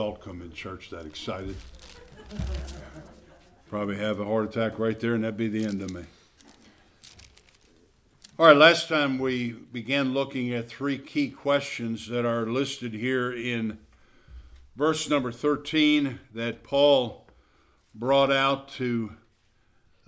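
No technical faults are audible.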